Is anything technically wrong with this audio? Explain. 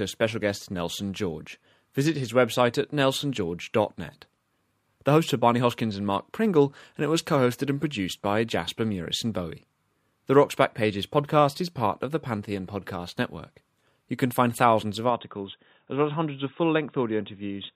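Yes. From 15.10 s to the end at 17.75 s, right after "can find thousands of", the speech turns boxy and dull. Nothing comes through above 3.8 kHz, the level drops by about 5 dB, and a faint new noise floor appears with no gap at the join. This is likely an input switched to a poorer device. A simple filter or codec cutback would only trim the top end, but here the tone, loudness and background noise all change at the same instant.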